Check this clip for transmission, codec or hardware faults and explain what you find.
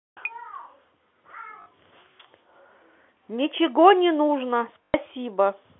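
Two dropouts are audible, both packet loss with the last packet repeated, carried over a telephone-band G.711 line. At 1.62 s, about 40 ms goes missing, and from 4.84 s to 4.94 s about 100 ms is missing. The receiver filled each gap by replaying the previous packet, and those repeats seldom line up with the pitch. The longer run gives a short robotic stutter that fits 20 ms packets repeating at 50 Hz.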